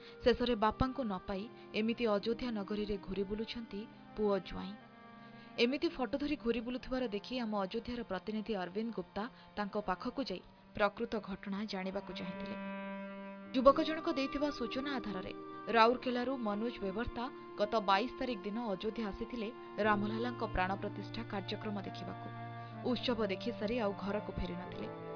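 No technical faults can be heard anywhere in this audio. Nothing in it calls for comment on any time point.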